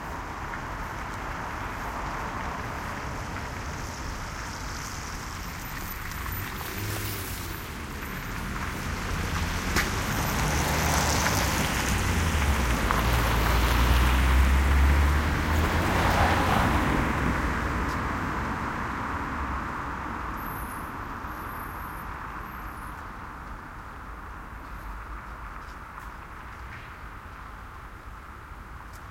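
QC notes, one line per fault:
Nothing stood out on listening to the sound.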